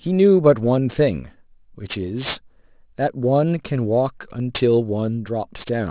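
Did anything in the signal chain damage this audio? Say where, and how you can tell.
Yes. Throughout the speech, sibilants and fricatives sound gritty and metallic, with hiss landing at odd, unrelated pitches and the spectrum running hard up to a 4 kHz ceiling. The damage happened at sample-rate conversion: the audio was dropped from 24 kHz to 8 kHz without a low-pass filter, so content above the new 4 kHz limit folded back down as aliasing. These mirrored components sit roughly 20 dB below the speech.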